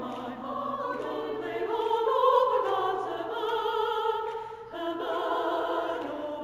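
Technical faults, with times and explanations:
Throughout: imaging from linear upsampling. The sample rate was raised by joining neighbouring samples with straight lines. That works as a weak low-pass filter. The top of the original band comes out dulled. A faint mirrored copy of the spectrum remains between 8 and 16 kHz, about 40 dB below the main sound. This points to audio first made at 16 kHz and later converted to 44.1 kHz. The leftover image adds a light metallic shimmer to bright, hissy sounds.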